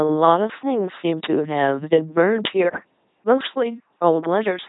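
Throughout the speech, heavy LPC-10 vocoder damage turns it into a buzzing, mechanical robot voice with nothing above 3.8 kHz, consistent with a 2.4 kbit/s rate. Each moment is rebuilt as pure pulse buzz or pure hiss, not the smeared warble of ordinary low-bitrate codecs.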